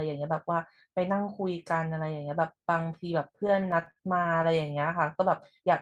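From 3.47 to 4.71 s the speech suffers repeated stalls (stutter): late packets emptied the jitter buffer 16 times, each gap up to 50 ms bridged by stretched sound, so delivery drags and judders.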